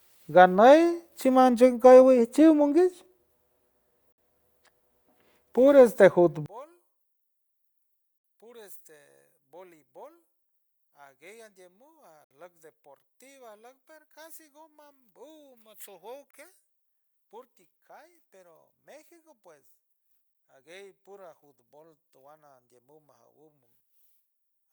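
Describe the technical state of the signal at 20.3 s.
A gap between stream segments falls at 20.34 s: a hard-edged hole of about 11.6 ms of silence cuts into the speech. Two consecutive segments are stamped so that their timing leaves a small space, and the player fills that space with digital silence rather than sound. Nothing is lost from either side; the gap adds time. The segments are about 4 seconds long, so the join sits on a segment boundary.

At the same moment, the whole passage is heard about 31 dB quieter, as it has been since 6.46 s, right after "puro este", and as it remains to the end. This is likely one channel inverted: with one stereo channel's polarity reversed, the centred speech common to both channels cancels when they are summed to mono. What survives is only the faint difference between the two channels, which is why the voice sounds so weak.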